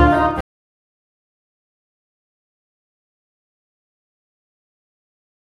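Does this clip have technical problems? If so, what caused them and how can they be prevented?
Yes. A stream reconnect silences the audio from 0.41 to 0.56 s. The waveform shows a flat 152 ms gap, and the spectrogram shows a blank vertical band. When the fresh decoder restarts, the audio jumps about 150 ms further on. A larger playback buffer, plus reconnection that resumes from the exact byte position, prevents this.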